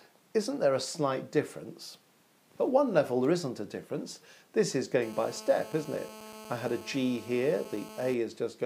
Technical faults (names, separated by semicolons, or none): GSM phone buzz